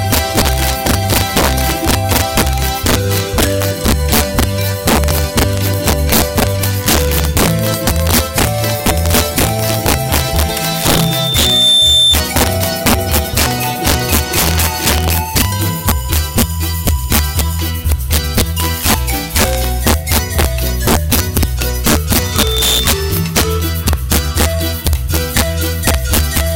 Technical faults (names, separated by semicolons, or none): integer overflow; loudspeaker feedback squeal